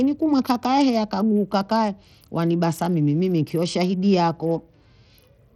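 From start to finish the speech carries damage that points to Bluetooth SBC compression, likely at a low bitrate near 80 kbps: starved upper sub-bands make the treble flicker and drop, with gritty noise and aliasing, unlike the steady clean roll-off of a simple low-pass filter.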